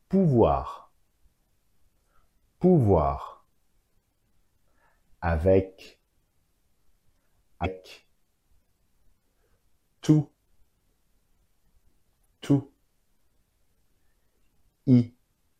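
At 7.62 s, for about 44 ms, and again at 12.22 s, for about 40 ms, there is damaged data in the compressed stream. Corrupted bytes reach the decoder, which misreads the affected frames, loses frame sync and has to hunt for the next valid header before it can resume normal decoding. Each event is heard as a brief chirp, squawk, click or short hole that cuts across the surrounding audio.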